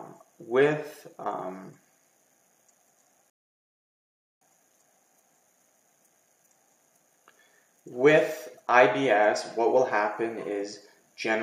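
At 3.30 s the sound drops out to silence and picks up again at 4.41 s, right where it left off. That's a rebuffering stall: the player ran dry of downloaded audio and waited for more, adding about 1.1 s without losing anything.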